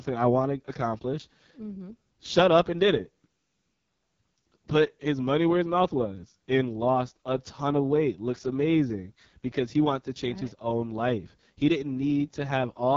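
From start to finish the speech passes through the AMR wideband (HD Voice) codec at one of its lowest rates; the heavy coding damage fits the 6.6 kbit/s mode. At this rate the pulse-driven vocal tract model has too few bits to follow the voice closely, so the speech sounds rough and raspy, with a buzzy, grainy edge. The band above 6.4 kHz is filled with synthetic shaped noise, and nothing is present above 7.5 kHz.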